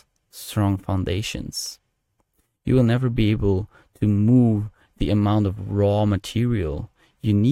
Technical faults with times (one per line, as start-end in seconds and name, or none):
none